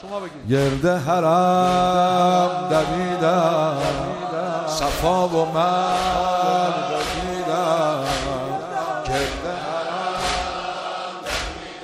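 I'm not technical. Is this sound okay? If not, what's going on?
Yes, this one sounds fine; nothing here jumps out as a glitch or problem you'd need to worry about.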